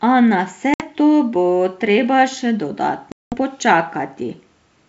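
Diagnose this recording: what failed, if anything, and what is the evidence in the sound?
Packet loss on an ADPCM call, a network fault, leaves hard-edged silent holes after "na vse" at 0.74 s (60 ms, a few packets) and after "to bo treba še" at 3.12 s (200 ms, about ten packets). Unlike concealed loss, sound resumes briefly and slightly distorted while the G.722 decoder's predictor re-converges.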